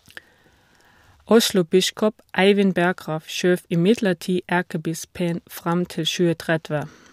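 No technical faults can be heard anywhere in the recording. There is nothing in the audio that calls for a time or a value.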